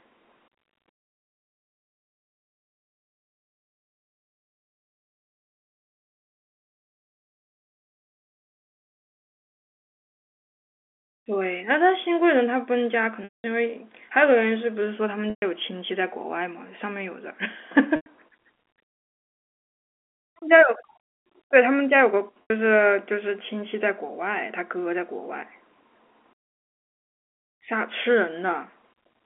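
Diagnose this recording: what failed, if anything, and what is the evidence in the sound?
The network lost packets, and the receiver covered each gap with packet loss with pitch repetition, looping the last pitch period. Speech stalls into a held, buzzy tone at 13.24–13.44 s, 15.30–15.42 s, 17.96–18.06 s and 22.42–22.50 s. The longest, 200 ms, fades toward silence before speech cross-fades back.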